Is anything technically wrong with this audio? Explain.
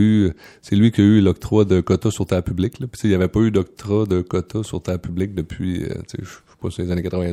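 No, there's nothing technically wrong here that I can hear, so this one's fine as it is.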